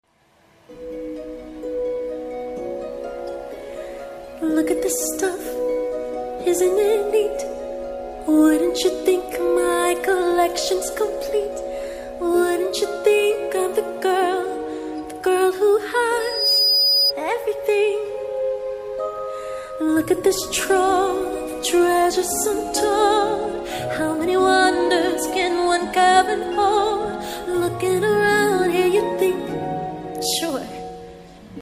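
From 16.20 to 17.13 s there's loudspeaker feedback squeal: the mic catches its own speaker, and a 4.9 kHz tone swells within a fraction of a second to sit about 5 dB above the sound.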